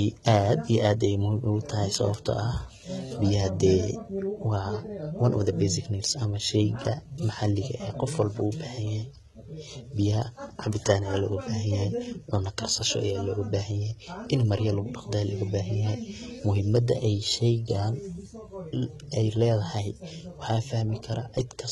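Throughout the speech, the top of the spectrum stops at 11.8 kHz, yet the treble above the coded band is rebuilt rather than original. The s sounds turn gritty and metallic, with heavy damage that fits HE-AAC compression at roughly 16 kbps. The likely cause is spectral band replication, which rebuilds the highs from copied lower bands, so the treble is present but mismatched rather than dulled as with a simple low-pass.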